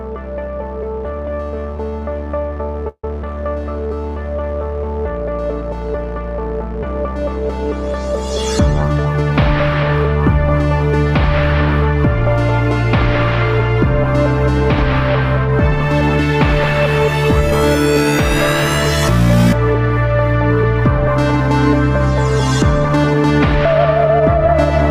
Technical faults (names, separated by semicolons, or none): repeated stalls (stutter); jitter buffer speed-up